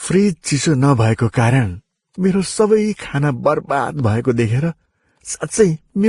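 A speech recording that carries the stacked artefacts of transcoding between lossy codecs for its whole length, with nothing above 12 kHz. The band limit and the stacked artefacts point to a likely chain of a low-rate Vorbis encode, around 28 kbit/s, followed by Opus at about 48 kbit/s. The second encoder spends its bits reproducing the first one's damage while adding its own, so both sets of artefacts sound together.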